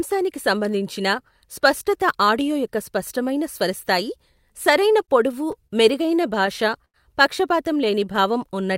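Speech in this recording breaks into repeated stalls (stutter) from 4.93 to 6.96 s. Packets arrived late, so the jitter buffer kept emptying and the receiver stretched the last sound to cover fourteen short gaps. The gaps total 245 ms, about 12% of that span, and the longest is 89 ms. Nothing is lost, but the audio drags. On a spectrogram these show as smeared, frozen stretches with repeated harmonic patterns. The waveform shows fades in the longer holds. From 7.76 to 8.73 s a jitter buffer slow-down adds 87 ms, playing the sound at 92% speed with unchanged pitch as single pitch periods repeat to rebuild reserve. The spectrogram shows harmonics stretched in time but not lowered, and the waveform shows near-identical cycles repeating.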